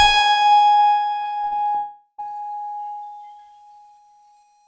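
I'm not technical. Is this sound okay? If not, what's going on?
No. From 1.22 to 1.77 s the music turns choppy and a bit robotic. This is repeated packet loss: four short chunks went missing and were patched by stretching nearby sound.

From 1.77 to 2.20 s the music gives way to a fading buzz, then a brief silence before it returns. That's likely a long network dropout, where nothing arrived for a while.

The call connection's codec also cuts everything above 8 kHz, so the music sounds duller.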